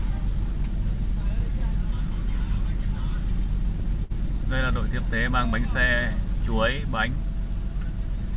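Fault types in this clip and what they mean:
Short stall from a late packet: at about 4.04 s the sound briefly hangs, one moment held for roughly 60 ms with a faint buzzy sameness before it moves on at 4.12 s, nothing skipped. A packet arrived late, the jitter buffer emptied, and the receiver stretched the last audio until it came, then resumed from the same point, leaving everything after about 60 ms later. The narrow band, with nothing above 4 kHz, fits a G.711 mu-law call path.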